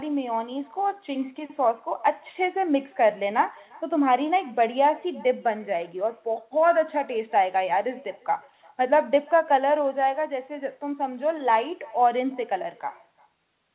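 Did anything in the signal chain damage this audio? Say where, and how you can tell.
Yes. Throughout, every phrase returns as a faint, thin copy, about 26 dB down and roughly 0.4 s late. This is echo with no canceller: the far-end loudspeaker leaks into its microphone.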